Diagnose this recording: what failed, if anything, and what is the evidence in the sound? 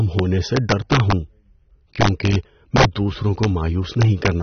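Integer overflow at the sample-format conversion stage, on speech peaks at 0.19, 0.57–1.12, 2.01–2.35, 2.76–2.85, 3.44 and 4.01–4.28 s, overdriven by up to about 4 dB. Unlike clipping, the peaks wrap to the opposite sign, so they crack instead of flattening.

Codec damage, likely AAC-LC at about 24 kbps. Nothing is present above 6.3 kHz, and the smeared spectrum sets it apart from a simple low-pass filter.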